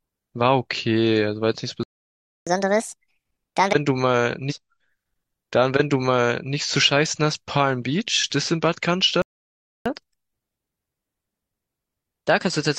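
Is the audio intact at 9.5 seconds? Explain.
No. A playback stall runs from 9.22 to 9.86 s, so 9.5 s falls inside it. The speech stops in mid-flow and the output goes completely silent for about 0.64 s before the sound resumes. The likely cause is the player running out of buffered data, or its audio thread being held up, so nothing reached the output until the feed caught up. The result is a dead gap, not a click or a smear.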